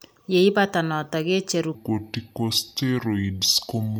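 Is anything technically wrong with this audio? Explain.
Yes. From 1.75 s to the end, a section plays at the wrong speed, about 0.7 times normal. The speech drops roughly seven semitones and drags, likely from a clock mismatch.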